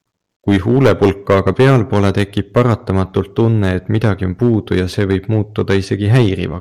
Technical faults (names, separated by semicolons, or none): hard clipping